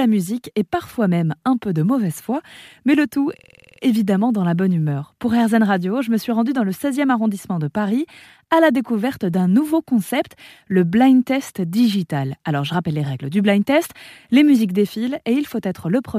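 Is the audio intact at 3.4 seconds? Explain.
No. From 3.39 to 3.81 s, right after "foi mais le tout", a system hang loop occurs: the system froze while the sound hardware kept replaying one ring buffer, so a 46.44 ms slice, which fits a 2048-sample buffer, repeats nine times at 21.5 Hz and produces a rapid mechanical stutter. The waveform shows identical repeated blocks, and the spectrogram shows evenly spaced vertical seams, until normal audio resumes at "évidemment dans la bonne".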